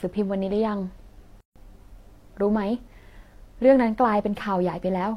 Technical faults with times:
1.40-1.56 gap at a join of encoded pieces

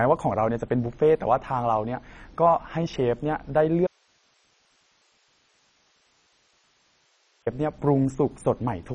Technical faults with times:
0.00-8.94 MP2 compression
3.87-7.46 audio dropout to a faint residue

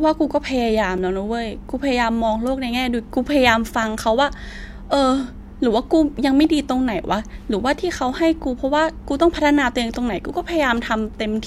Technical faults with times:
0.98 block of digital silence
9.35 block of digital silence

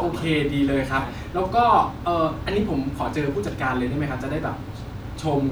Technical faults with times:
none

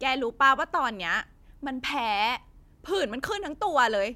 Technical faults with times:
none

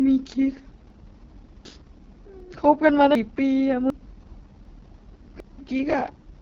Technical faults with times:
0.00-6.41 AMR wideband (HD Voice) codec
0.90 audio missing between chunks
1.65 audio missing between chunks
2.40 audio missing between chunks
3.15 audio missing between chunks
3.90 audio missing between chunks
4.65 audio missing between chunks
5.40 audio missing between chunks

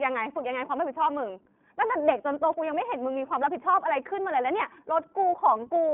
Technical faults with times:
0.00-5.93 iLBC codec

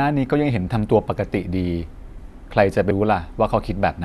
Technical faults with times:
2.90 compressed frames skipped

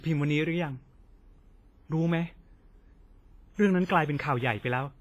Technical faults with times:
0.00-5.00 WMA compression
3.85-3.89 pre-echo
4.18 pre-echo

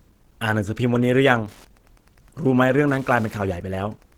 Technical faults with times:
0.00-4.18 Opus compression
1.26-4.18 Wi-Fi interference

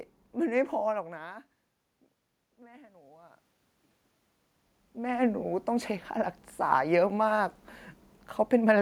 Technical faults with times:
2.58-3.48 automatic gain rising

